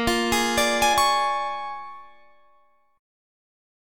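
Damaged data in the compressed stream at about 0.93 s: a stretch of the encoded file is corrupted, so the decoder misreads the affected frame, loses sync and hunts for the next valid frame header. The result is a very short blip lasting under 20 ms.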